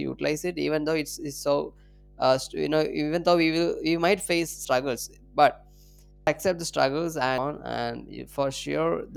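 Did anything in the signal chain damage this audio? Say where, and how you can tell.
Yes. Mains hum runs throughout at 50 Hz, about 25 dB below the speech. A ground loop or transformer in the analogue wiring is coupling power-line current into the signal.

Compressed frames skipped at 4.65, 6.27 and 7.38 s: the decoder drops whole 85.3 ms frames, jumping roughly 0.3, 0.3 and 0.7 s.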